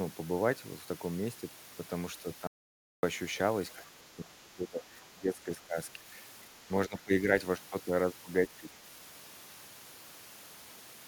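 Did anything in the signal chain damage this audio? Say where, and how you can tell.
Yes. From 2.47 to 3.03 s there is an audio dropout to silence lasting about 0.56 s. The signal stops mid-flow and returns abruptly. The gap is silent with no room tone, so whatever happened then is lost. On a waveform it is a dead flat line. A spectrogram shows a fully black vertical band with hard edges. The cause is likely an input loss at the device or driver stage while recording continued.

The second fault is speech suppressed in double talk, which happens at the call-processing stage. The level sinks by up to about 20 dB within 3.76 to 5.77 s, by about 5 dB at 5.93 to 6.07 s, by about 15 dB at 6.88 to 7.27 s, and by about 10 dB at 8.59 to 8.67 s. The waveform envelope pinches in these stretches. A spectrogram shows the upper harmonics thinning or breaking into patches. This is likely an echo canceller attenuating the loudspeaker-side voice during overlapping speech.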